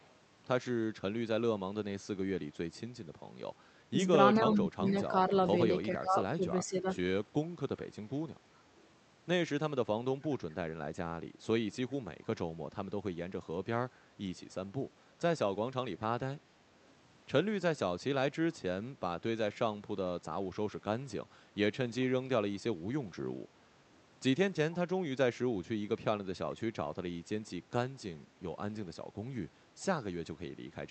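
An echo canceller on a loudspeaker end likely let part of its microphone pickup pass back into the call, and from 0.02 to 0.12 s that echo leak shows up as a very faint copy of the speech arriving about 412 ms late.

Around 3.9 s, the same canceller likely mistook simultaneous talk for its own loudspeaker echo and attenuated everything, giving speech suppressed in double talk: short level dips at 3.91–3.99 s, a longer one at 4.36–5.12 s, then 5.89–6.18 s and 6.37–6.97 s. The deepest of these, in the 4.36 s stretch, cuts the voice by roughly 20 dB, while the later dips are shallower.

Inside that 4.36–5.12 s stretch, the echo leak returns at 4.86–4.92 s, again 412 ms late but much louder than at the start, a brief ghost of earlier speech within the 8 kHz Opus band.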